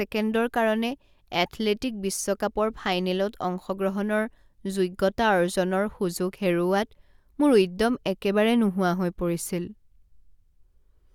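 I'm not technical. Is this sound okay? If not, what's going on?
Yes, nothing in this recording stood out as a problem when I listened to it.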